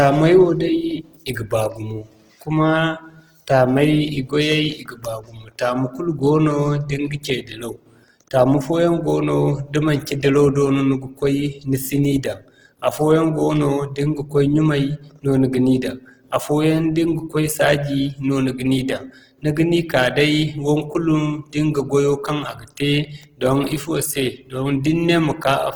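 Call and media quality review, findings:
Opus compression, throughout: grainy, rough speech, with starved bands noise-filled rather than left as holes; content reaches 20.1 kHz. Likely Opus CELT mode, consistent with about 16 kbps.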